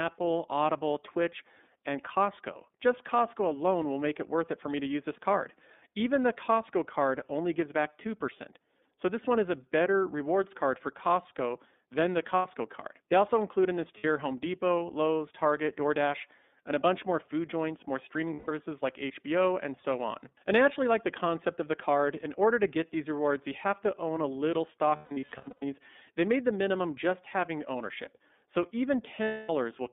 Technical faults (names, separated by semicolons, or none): iLBC codec; lost iLBC frames